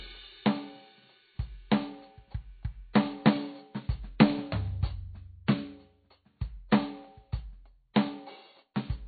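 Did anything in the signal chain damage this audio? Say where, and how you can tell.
Yes. The whole clip is dull and watery. Nothing reaches above 4.6 kHz, and weak detail swirls in and out. That points to the codec stage, likely MP3 compression starved at a very low bitrate, around 24 kbps, cutting the treble and dropping quiet frequency lines frame to frame.

The same codec also leaves pre-echo: a brief hiss just ahead of sharp attacks at 2.93 s, 5.47 s and 7.94 to 7.96 s, spreading 12 to 23 ms early. Each block's quantisation noise, sized for the loud hit, leaks into the quiet moment before it, so those attacks sound soft.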